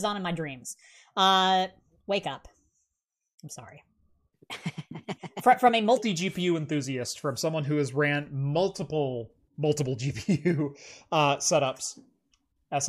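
A playback or editing stage likely ran the opening section on the wrong clock: from 0.0 to 5.97 s the speech plays at 1.21 times its recorded speed. This section at the wrong speed sounds hurried and raised in pitch by roughly three semitones.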